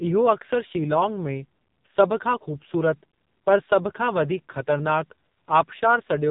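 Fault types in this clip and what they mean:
AMR narrowband mobile codec: The speech was squeezed through the narrowband mobile codec used on 2G and 3G calls, which samples at 8 kHz and rebuilds the voice from a vocal-tract model excited by a few pulses per short subframe. Nothing above about 3.8 kHz survives, so the speech sounds boxed-in and telephone-like, and the heavy damage makes it buzzy and synthetic throughout, consistent with one of the codec's low modes around 6 kbps.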